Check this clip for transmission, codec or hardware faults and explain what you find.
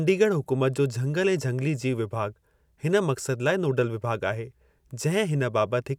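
No faults can be heard anywhere in this speech.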